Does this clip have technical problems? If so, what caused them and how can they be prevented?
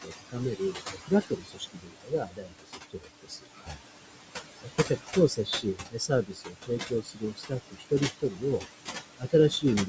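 Yes. Noise suppressor artifacts run through the whole clip. The room noise, only about 8 dB below the speech, is pushed down by about 20 dB frame by frame. The noise sinks between the words and rises under them. To prevent it, reduce background noise at the microphone so the suppressor can work less aggressively.

Speech cut by the noise suppressor occurs at 0.0–3.82 s, 4.62–4.92 s, 5.13–7.54 s, 7.71–8.63 s and 9.16–9.34 s, with drops of about 20 to 22 dB. The suppressor classed quieter speech as noise and attenuated it. Most of the opening three seconds and about a second and a half around the middle sound swallowed or faint. To prevent it, raise the speech level relative to the noise, for example by placing the microphone closer.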